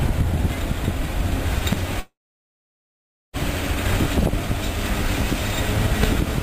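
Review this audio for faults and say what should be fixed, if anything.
A loud pop hits at 1.73 to 1.75 s, and another at 6.03 to 6.06 s. Each is a single sharp crack. The first peaks roughly 15 dB above the surrounding sound. The second is louder, at about 20 dB. The sound carries on underneath both. The likely cause is a sudden electrical step or pulse, such as a plug, a switch, static or a driver glitch. The circuits after it shape it into a short burst. Secure connectors, ground the setup and avoid switching devices while recording.

A call audio freeze runs from 2.00 to 3.36 s. The sound stalls and the last moment smears into a fading buzz or hiss. Then about 1.2 s of near silence follows. When the sound resumes, it picks up exactly where it stopped. Nothing is lost. Instead, about 1.34 s is inserted, and everything after it arrives that much later. The likely cause is delayed network packets that drained the receiver's jitter buffer. 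Use a more stable connection or a larger jitter buffer.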